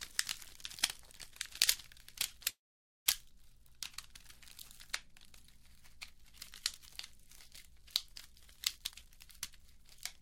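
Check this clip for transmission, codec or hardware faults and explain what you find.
Two faults turn up in this clip of everyday sounds: a call audio freeze and a jitter buffer speed-up near the end.

From 2.49 to 3.08 s the sound hangs. The last bit of audio carries on briefly as a buzzy tail, then drops to silence for about 510 ms before picking up where it left off. That's likely a call audio freeze: packets got held up, the jitter buffer ran dry, and the receiver filled about 565 ms. Nothing was lost, but the stream now sits that much later.

From 8.77 to 10.13 s the audio rushes along at about 126% speed with its pitch unchanged, so it sounds hurried rather than higher. That's a jitter buffer speed-up. The buffer had built up more audio than it wanted, probably after delayed packets arrived together, so the receiver kept trimming short pitch-period-sized pieces to catch up, cutting around 0.4 s in total.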